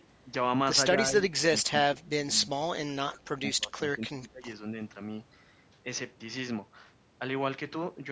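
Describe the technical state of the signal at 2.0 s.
At 2.0 s the echo canceller has likely clamped down on a moment of double talk, with both ends active at once. Unable to tell the near talker from the loudspeaker echo, it attenuates everything it hears. Between 1.94 and 2.11 s the speech is suppressed in double talk: it sinks by around 20 dB at its deepest, with roughly 150 ms affected in total, against a band that already ends at 8 kHz.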